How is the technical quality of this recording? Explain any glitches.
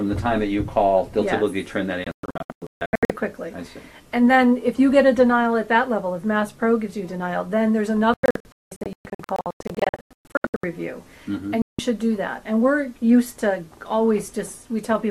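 The recording has three digital broadcast dropouts. Between 2.04 and 3.10 s, holes totalling 0.74 s break the sound, the longest 0.14 s. Between 8.14 and 10.64 s, about 1.56 s goes missing, with runs up to 0.19 s. A single 0.17 s gap falls at 11.62 to 11.79 s. Each time the receiver lost frames or rejected corrupt ones and muted until clean data returned, so the sound simply stutters out and that material is gone. A waveform shows flat silent stretches, and a spectrogram shows sharp full-height blank columns.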